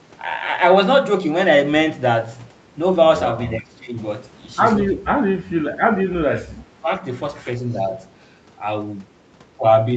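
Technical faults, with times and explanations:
3.59–4.0 s, 4.95–5.63 s, 6.16–6.9 s, 7.74–7.94 s: speech suppressed in double talk. The voice drops by up to about 15, 20, 25 and 5 dB, likely because the echo canceller turned down overlapping talk.
7.65–7.77 s: echo leak. A brief, faint copy of the voice arrives 335 ms late and about 35 dB down, likely loudspeaker echo the canceller failed to remove.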